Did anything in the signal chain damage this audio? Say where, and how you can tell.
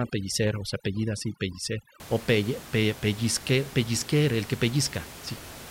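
Yes: overdone noise removal in the call processing, 0.0 to 2.0 s before "o pelle". Aggressive band gating leaves twinkling residue, seen as scattered isolated specks on a spectrogram.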